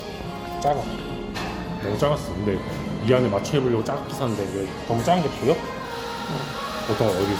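A recording of everyday sounds, it has a swirly, hollow, smeared character throughout, with transients blurred and nothing above about 20 kHz. That points to generation loss, likely from lossy MP3 coding repeated about four times, which fits a 96 kbit/s chain, each pass requantising on a shifted frame grid so the noise and spectral holes build up. At 0.67 s a sharp snap sits on top of the sound, an electrical switching spike, likely a nearby switch or static discharge arcing briefly into the audio line. From 2.00 s to 3.79 s everything slows by about 6.3% and drops roughly 112 cents, just over a semitone, then snaps back to normal. This is a drift correction step, likely clock-matching software abruptly changing the playback rate to rebalance its buffer.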